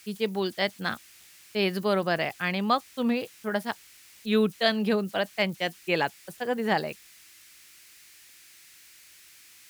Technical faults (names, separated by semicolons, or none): converter idle tones